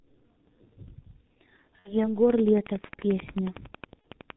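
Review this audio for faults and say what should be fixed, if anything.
The whole clip runs through the G.723.1 codec, and heavily. Everything above 4 kHz is gone, so the speech sounds muffled and hoarse with smeared consonants, which fits its 6.3 kbit/s mode, where 30 ms frames and a slow-moving voice model can't follow fast articulation. To fix it, send the call over a wideband codec such as Opus or G.722 instead.

There are two spots of VoIP packet loss concealed by the speech codec. From 1.79 to 2.15 s the decoder stretches its last pitch and filter into a fading sound and recovers slowly. The loss there comes to about 60 ms, two 30 ms frames. A shorter one at 4.02 to 4.07 s fits a single lost frame, about 30 ms. Reduce this with a properly sized jitter buffer, FEC or redundancy, and a cleaner network path.

A train of clicks starts at 2.30 s and runs to 4.31 s. It's about twenty near-identical pops at a steady 11 per second, roughly 10 dB louder than the speech, and they tick through the pauses too. 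The likely cause is interference from nearby gear or a faulty connection or power supply. Check the cabling and grounding, and move the interface away from noisy equipment.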